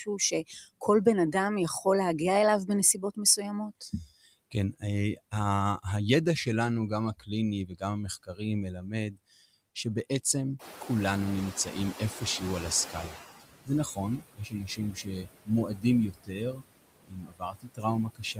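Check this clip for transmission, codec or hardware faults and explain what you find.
The faults all come from the noise suppressor in the processing chain; there are no transmission or hardware faults here.

Noise suppressor artifacts run through the whole clip. Steady noise is cut by about 19 dB between phrases and rises under speech.

Speech cut by the noise suppressor occurs at 0.06–1.86, 2.67–3.94, 4.51–5.84, 7.17–9.19 s and from 11.65 s to the end. The suppressor misreads soft speech as noise and attenuates it, by up to about 11, 17, 13, 20 and 21 dB respectively. The affected speech sounds swallowed or faint, with roughly 0.7 s affected in the 7.17 s stretch.

The noise suppressor catching up runs from 10.59 to 13.3 s. When the room noise jumps by about 19 dB near 10.5 s, the noise estimate lags. The noise first leaks through, then sinks by about 15 dB over 2.7 s of adaptation.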